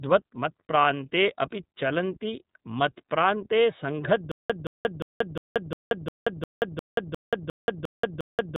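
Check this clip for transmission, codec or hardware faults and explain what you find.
Two faults are present: the whole clip has passed through the iLBC codec, and from 4.32 s to the end playback breaks down into a stutter with silent gaps.

The iLBC codec damage runs throughout and is plainly audible. Nothing above about 3.8 kHz survives, so the speech is confined to a narrowband telephone range. Each frame's excitation is coded on its own, without reference to the previous frame, and the resulting roughness and synthetic edge fit the 13.33 kbps mode with 30 ms frames. Consonants lose air and sibilance, and the voice takes on a slightly buzzy, processed texture.

The stutter with silent gaps begins at 4.32 s and lasts to the end. A 173 ms fragment plays, then about 181 ms of digital silence follows, and the same fragment returns every 354 ms, 12 times in all. The likely cause is a stalled player or stream that replays its last buffered fragment on each retry and then runs dry. 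Everything that should have played after 4.32 s is lost, replaced by a mechanical, evenly paced repeat.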